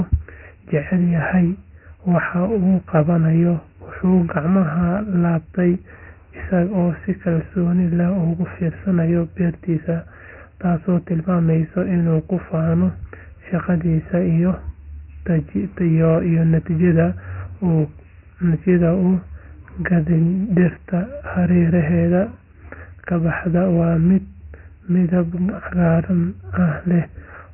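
From start to finish the speech carries Dialogic VOX ADPCM coding: nothing survives above 3 kHz, and a gritty hiss tracks the speech, which fits 4-bit samples at 6,000 per second. Unlike plain telephone band-limiting, the grit rises and falls with the voice.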